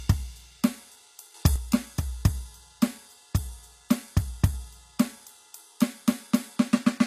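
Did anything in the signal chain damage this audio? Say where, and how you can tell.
Yes. HE-AAC compression runs throughout the music, at the codec stage. Nothing sits above 14.9 kHz, and the treble sounds plainly synthetic, gritty and metallic. This is likely spectral band replication rebuilding the top octave from copied lower bands, which fits a low bitrate around 24 kbps.

A sudden gain jump occurs from 1.34 to 1.56 s, most likely at the driver or processing stage. Music and background noise step up together by about 8 dB with no ramp, then drop back, which points to a gain setting applied instantly from one sample to the next.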